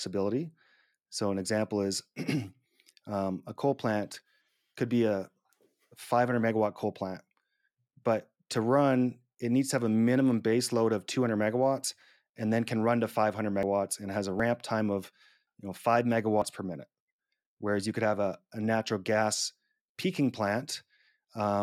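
At 11.84, 13.63, 14.40 and 16.42 s the speech jumps ahead by a few tens of milliseconds, likely a dropped buffer (overrun) that lost audio before capture.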